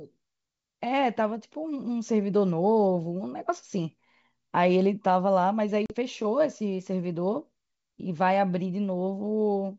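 Around 5.86 to 5.95 s there's packet loss on an ADPCM call: roughly a couple of packets, about 40 ms, drop out as a hard-edged silent gap. The decoder's predictor and step size lose track of the sender, so the speech comes back slightly distorted before settling.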